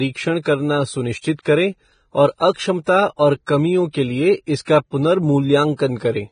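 From start to finish the speech carries heavy damage that is likely from Vorbis compression at a low bitrate, somewhere near 22 kbps. Nothing remains above 9.7 kHz, and the treble below that edge is coarsely quantised, so fine detail turns into hiss and grain of similar loudness, tones sound roughened and consonant attacks are smeared. A simple low-pass filter would only dull the top end, whereas here the remaining high band is itself noisy.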